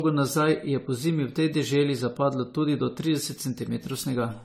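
Across the whole speech clip the sound is swirly and hollow, with smeared attacks and a watery, phasey texture that goes beyond what a single lossy pass would leave. Content stops at about 18.1 kHz. This is generation loss, likely from AAC-LC encoding repeated about seven times at a rate that sounds near 64 kbit/s. Each re-encode quantises on a shifted frame grid, so noise and spectral holes accumulate pass after pass.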